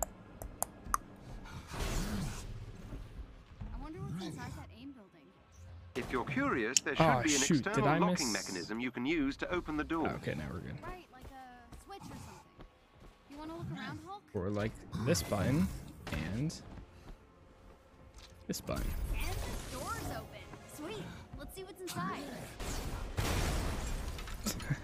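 No technical faults can be heard anywhere in the recording, and the signal holds steady and continuous throughout.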